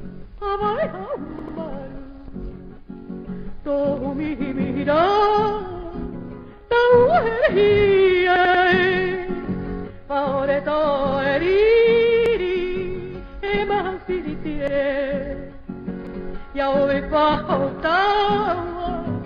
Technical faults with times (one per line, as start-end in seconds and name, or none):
1.39-1.58 repeated buffer
8.36-8.64 repeated buffer
12.26-12.35 repeated buffer
14.68-14.77 repeated buffer
16.07-16.16 repeated buffer